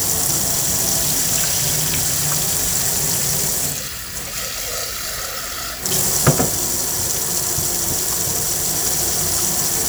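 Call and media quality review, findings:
No faults found in this recording of sounds. Nothing audible requires follow-up on this ticket.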